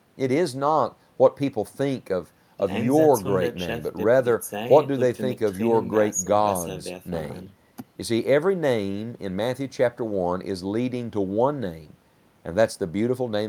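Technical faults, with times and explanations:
Nothing stood out as a technical problem on listening to this speech recording.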